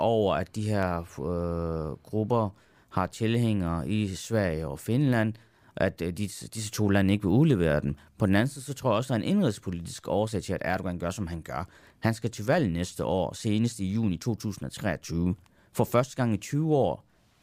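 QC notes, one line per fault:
0.83 s, dropped samples. A single sharp click sits in the speech here. It is a thin vertical line across the spectrum. The likely cause is a fraction of a millisecond missing from the stream, so the waveform jumps abruptly to a later value.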